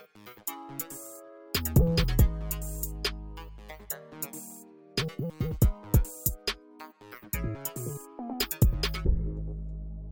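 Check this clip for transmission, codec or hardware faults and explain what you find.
Nothing found; no transmission, codec or hardware fault is audible anywhere in the clip.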